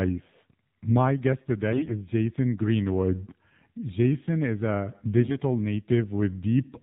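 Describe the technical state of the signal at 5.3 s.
At 5.3 s the voice turns hoarse, scratchy and gargly while keeping roughly its pitch and loudness. This is AMR bit errors, running from 5.21 to 5.38 s. Over a weak link, bits in the less protected part of each AMR frame arrived flipped while the check on the critical bits still passed, so the decoder accepted the frames. The excitation pulses landed in the wrong positions and the finer pitch, gain and spectral values were off. The span of about 0.16 s fits roughly seven damaged 20 ms frames, and the roughness suggests a few percent of bits corrupted.

Under this lies the plainly audible AMR narrowband mobile codec damage present across the clip. The voice is buzzy and synthetic, and nothing above 4 kHz survives. AMR-NB samples at 8 kHz and rebuilds speech from a vocal-tract model driven by sparse pulses, and the coarseness fits a low mode around 7.4 kbps.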